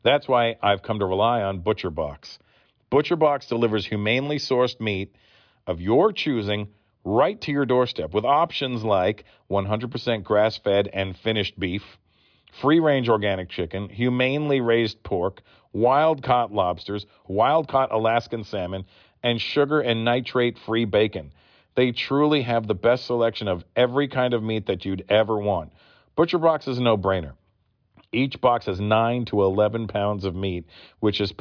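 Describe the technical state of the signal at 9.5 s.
At 9.5 s the speech signal is intact, with no audible dropout, distortion or other fault.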